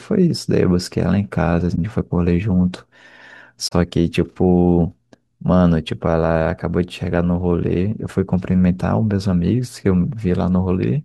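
A corrupt frame concealed at 1.75 to 1.78 s, and again at 3.68 to 3.73 s: damaged AAC data was detected and masked, consistent with one and then two lost frames. Periodic clock jitter from 7.06 s to the end: the converter clock wobbles at around 100 Hz, adding sidebands that give the speech a rough, metallic edge.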